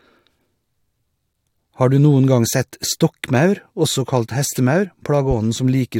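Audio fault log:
2.52 s and 4.84 s, compressed frames skipped: twice the speech jumps ahead by about one frame of the compressed stream, roughly 20 ms gone each time, once right after "du noen gang" and again after "stokkmaur også kalt". A 21.3 ms frame length fits a 1024-sample frame. The speech briefly hiccups forward where the missing frame is skipped.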